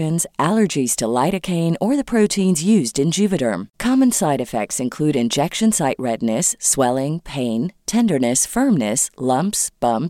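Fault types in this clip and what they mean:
No faults can be heard.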